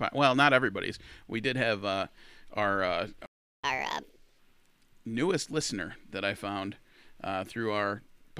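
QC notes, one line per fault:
3.26–3.64 s, playback stall: the player likely ran short of buffered data or had its output thread blocked, so nothing reached the output. The speech cuts off mid-flow into about 375 ms of silence before sound resumes.
3.64–4.39 s, catch-up at higher speed: to recover the time lost in the stall, the player resamples its backlog at 1.5 times normal rate. Speech runs noticeably faster and rises by roughly seven semitones, then drops back to normal speed and pitch.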